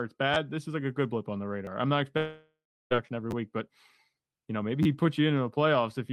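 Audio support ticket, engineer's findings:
Repeated buffer at 0.34, 1.65, 3.31 and 4.83 s. Short click-buzz stutter each time, at 1.65 s between "good blip on the" and "I'm not", at 4.83 s after "you know maybe". Playout device re-played its last ~10 ms buffer twice, about 20 ms of audio lost per event.

Long network dropout, 2.17 to 2.93 s, right after "I'm not". Decaying buzz continues the last sound, then about 0.34 s of silence. About 0.74 s of audio never played. Likely packet loss upstream of the jitter buffer.

Call path sounds Opus-coded, top end cut near 12 kHz.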